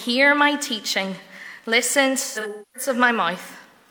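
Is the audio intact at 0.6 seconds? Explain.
Yes, the audio is intact at 0.6 seconds, with no fault heard at that moment.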